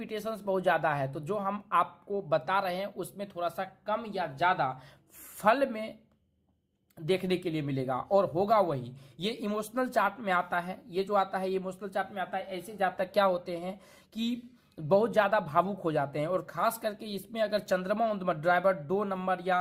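No technical faults can be heard anywhere in the recording; the signal stays steady and intact throughout.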